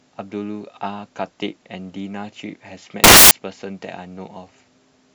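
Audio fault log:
3.04–3.31 s, samples built from the wrong bytes: the speech is abruptly replaced by a burst of loud, harsh broadband noise lasting about 0.27 s. The reader misassembled each sample's bytes, so the rapidly fluctuating low bits became the dominant part of every value.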